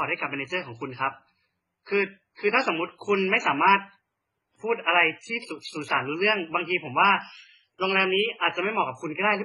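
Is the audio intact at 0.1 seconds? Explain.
No, not at 0.1 s. The speech is already affected there, and it stays that way through the whole clip. The likely cause is transcoding between lossy codecs. It sounds like a very low-bitrate MP3 pass followed by a low-rate HE-AAC pass. The second encoder spends its bits re-coding the first one's artefacts, then adds its own artefacts on top, so you hear both together. Nothing survives above about 11.2 kHz either.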